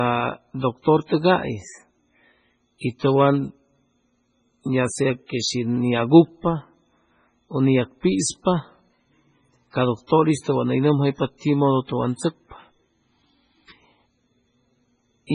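Throughout the speech the sound is dull and smeared, with nothing at all above 10.5 kHz and the watery artefacts of a very low-bitrate MP3. This is likely low-bitrate audio saved at a high bitrate: re-encoding kept those losses without restoring anything.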